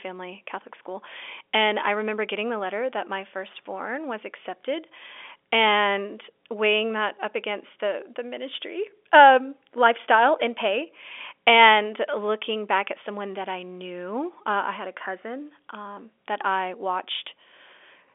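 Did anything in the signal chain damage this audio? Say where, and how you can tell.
No, no damage found.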